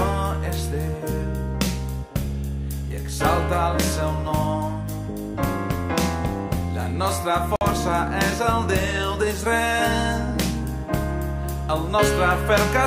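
The audio has one Bluetooth stall. From 7.56 to 7.61 s the sound cuts out completely. The gap of silence lasts about 52 ms. Then playback resumes abruptly, with no fade in or out. The likely cause is radio interference on the wireless link. Packets were held up, and the headphones' small buffer emptied before they arrived. With nothing left to play, output simply stopped. It restarted once the resent packets got through.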